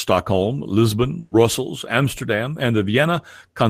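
At 1.19 s the speech stalls into a held buzz or fading hiss for about 120 ms, then jumps ahead to 1.33 s. This burst of packet loss dropped consecutive packets, so the receiver stretched and faded the last sound, skipping 120 ms of audio.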